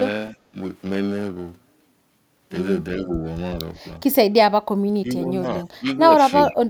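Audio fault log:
throughout: periodic clock jitter, roughly 1 kHz, adds sidebands either side of every component, giving a rough metallic edge that disappears in silences, unlike steady noise.
0.32–0.56 s, 3.04–3.1 s, 4.8–5.99 s, 6.48–6.7 s: speech suppressed in double talk, dips of about 15, 5, 25 and 40 dB, likely an echo canceller ducking both talkers while overlapping.
6.45–6.5 s: echo leak, a faint copy about 30 dB down, delayed 374 ms, likely loudspeaker pickup slipping past cancellation. It is a distinct late repeat, not a dip.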